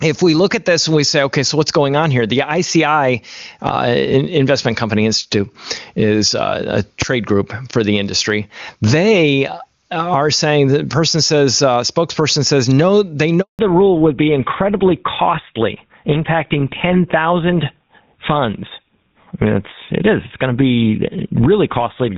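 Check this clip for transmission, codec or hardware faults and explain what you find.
Yes, there's a fair bit going on in this speech clip: constant level pumping, one sharp bang, a short dropout, and a drop to narrowband for the last stretch.

Gain pumping runs through the whole thing. The level swings by something like 15 dB. That points to input gain set far too hot for the mic, with a fast limiter or compressor clamping down on each loud peak. The result is squashed dynamics, with loud and quiet parts crowded into the same level.

At 7.02 s there's a single loud bang, caused by invalid numbers at full scale. Some calculation in the chain blew up to infinite or invalid values, and those got pinned to the maximum sample value for a block only about 5 ms long. A block that short doesn't have time to sound like a pop, a hole and another pop, so it collapses into one hard click.

From 13.41 to 13.59 s, a 180 ms handover gap cuts the speech out. 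This is what you get when the phone moves the call from one network to another and no speech frames make it through during the switch. The voice fades within a few tens of milliseconds, then there's dead silence until the new link comes up, and whatever was said in that window is simply gone.

Right after that gap, from 13.59 s to the end, there's a fallback to narrowband. Before it, the AMR wideband (HD Voice) codec sounds clean, like a high-rate mode, with the top end intact. After it, nothing survives above 4 kHz. The call dropped down to a GSM full-rate-style narrowband codec, so the voice goes duller and a bit rougher, losing the air and crispness it had earlier.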